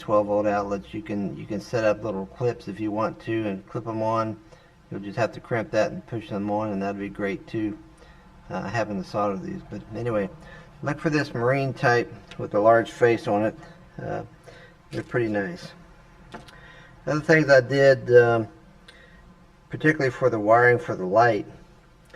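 One channel reached the mono mix roughly 5 ms behind the other, and summing the pair produced channel delay (comb filtering) across the whole recording. Anything common to both channels cancels at evenly spaced frequencies, starting near 100 Hz and repeating about every 200 Hz upward. Because the delay sits well above the dulling range but below the point where it would sound doubled, the audio takes on a hollow, phasey colour with fixed notches.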